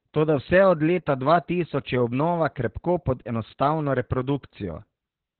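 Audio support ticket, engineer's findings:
Speech muffled, hoarse and slightly robotic throughout; nothing above 4.2 kHz. Opus voice compression, SILK narrowband mode: linear-prediction coder with coarsely coded excitation, band cut to telephone width. Heavy damage, pointing to a bitrate near 8 kbps.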